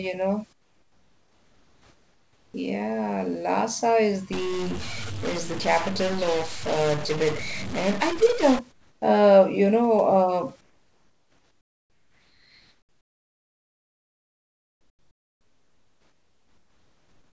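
From 0.53 to 2.54 s, comfort noise replaces the background. For about 2.01 s the real room sound gives way to a smooth, featureless hiss, about 10 dB quieter. The likely cause is discontinuous transmission: the sender's voice detector heard no speech, so it stopped sending audio. The receiver then filled the gap with synthetic noise.

From 4.33 to 8.59 s, a stuck bit distorts the sound. The speech turns distorted. Pauses fill with gritty noise. A single data bit, likely stuck from a broken line or converter, is forcing many samples off by a fixed amount. The fault stops just before "uh you".

Comfort noise returns from 8.72 to 9.02 s, lasting 0.3 s and about 8 dB down, again before "uh you". It comes back at 10.61 s and runs to the end, 6.72 s of flat substitute noise about 10 dB below the real background. Across all three stretches, the rest of the call path limits the sound to nothing above 8 kHz.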